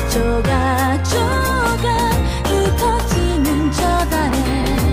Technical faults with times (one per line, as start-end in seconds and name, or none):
none